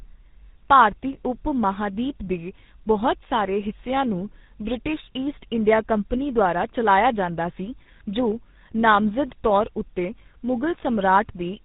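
Throughout, tandem speech coding: GSM full rate recodes what G.726 already degraded, giving rough, muffled, warbly speech. The spectrogram shows nothing above 3.8 kHz.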